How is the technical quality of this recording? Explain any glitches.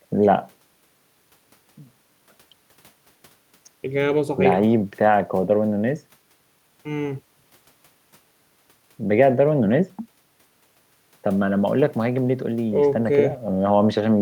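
No technical glitches can be heard anywhere in the recording, and the signal stays intact and continuous throughout.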